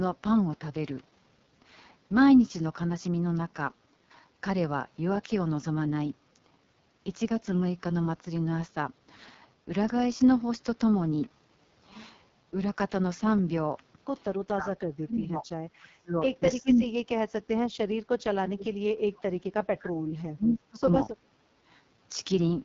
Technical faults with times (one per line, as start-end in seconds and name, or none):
0.00-22.64 AMR wideband (HD Voice) codec
14.44-14.71 speech suppressed in double talk
14.99-15.47 speech suppressed in double talk
15.80-16.19 speech suppressed in double talk
16.60-17.30 speech suppressed in double talk
18.11-20.80 speech suppressed in double talk
20.50-20.58 echo leak